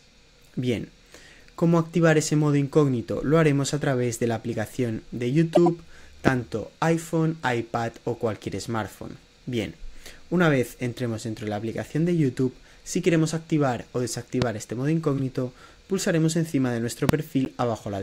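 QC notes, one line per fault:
5.54–5.68 s, 15.18–15.20 s and 17.45–17.48 s, corrupt frame decoded: damaged compressed frames were played rather than concealed, so misread gains and codes put energy at the wrong frequencies. Each event is a short chirp or noise burst lasting about as long as the damaged frames. The first covers several frames and peaks around 5 dB below full scale. The later two are shorter and quieter, around 20 dB and 15 dB below full scale.
6.28–6.30 s, 14.42–14.44 s and 17.09–17.11 s, loud pop: each is a single sharp pop about 22 ms long that stands roughly 20 dB above the surrounding sound, which continues underneath. The likely cause is a sudden voltage step or pulse, such as a switch, plug contact, static discharge or driver glitch, entering the chain. The downstream circuitry shapes that pulse into the brief, hard transient heard here.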